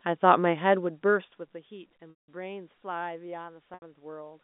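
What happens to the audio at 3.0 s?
Nothing goes wrong at 3.0 s; the audio is intact there, carried on the same narrow telephone band as the rest of the line.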